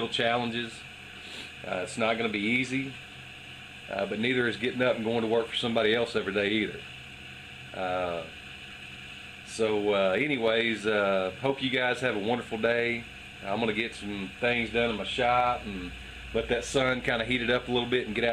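No technical faults can be heard anywhere in the clip. No dropout, glitch or distortion breaks into the sound at any point.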